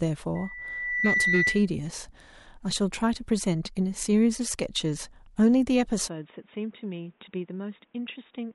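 From 0.35 s to 1.68 s, a microphone picks up its own loudspeaker and the loop gain passes one at 2 kHz, causing loudspeaker feedback squeal. A single 2 kHz tone swells within under a second to a piercing squeal a few decibels above the speech.

At 6.08 s the recording likely switches its input to a poorer device, and it stays on it to the end. With no gap at the switch, the speech abruptly turns dull and boxy, with nothing above 3.8 kHz. It drops about 10 dB in level, and a faint new background noise sits well beneath it.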